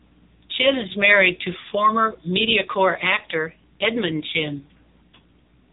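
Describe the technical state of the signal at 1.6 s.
At 1.6 s, as throughout, AMR narrowband mobile codec damage: speech rebuilt from a pulse-driven vocal-tract model, buzzy and synthetic, nothing above 3.8 kHz, consistent with roughly 6.7 kbps.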